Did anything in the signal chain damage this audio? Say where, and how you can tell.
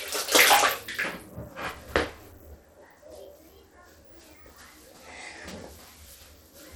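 Yes, at the codec stage, throughout: the treble flickers in and out with gritty noise and aliasing riding on the sound, likely Bluetooth SBC compression at about 96 kbps. Its coarse sub-band quantisation leaves top bands starved, unlike a plain low-pass filter's steady, clean cut.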